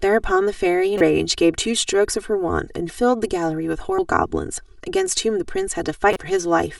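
Throughout the speech, channel delay produces comb filtering. One channel trails the other by roughly 3 ms, so the mono sum cancels at evenly spaced frequencies starting near 200 Hz. The hollow, phasey colouring holds steady instead of sweeping like a flanger.

Damaged data in a compressed stream strikes at 0.98 to 1.01 s, again at 3.98 s, and at 6.13 to 6.17 s. Corrupted frames make the decoder lose sync and hunt for the next header. Each event is a brief chirp, squawk, click or short hole.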